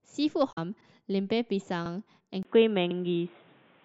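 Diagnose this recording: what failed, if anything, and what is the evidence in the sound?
A glitch from 0.49 to 0.58 s points to damaged data in the compressed stream: the codec decoder misread corrupted frames and lost sync until the next header.

Glitches at 0.81, 1.86 and 2.91 s each repeat 50 ms of audio once a second, a buffer-stage fault of overlapping chunks, where each 1 s chunk starts before the previous one ends.

From 2.43 s the sound turns dull and boxy after a 20 ms gap, with nothing above 3.8 kHz, new noise about 40 dB down and a level shift of about 5 dB, likely an input switched to a poorer device at the driver stage.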